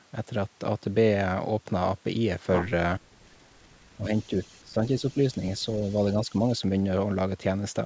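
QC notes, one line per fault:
3.97–4.32 s, 4.63–5.66 s, 6.28–6.61 s, speech suppressed in double talk: the speech dips about 5 dB, and up to about 15 dB in the middle stretch. The likely cause is the echo canceller turning down the near talker while both sides speak.
4.17–4.6 s, 5.0–5.18 s, 5.84–6.38 s, echo leak: a faint copy of the speech, about 30 dB down, returns 470 ms late. This is likely loudspeaker echo that the canceller left unremoved.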